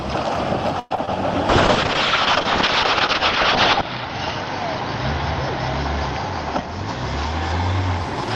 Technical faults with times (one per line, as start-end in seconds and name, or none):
0.79-0.92 call audio freeze
0.96-1.09 short concealed packet loss
1.50-8.07 call bitrate drop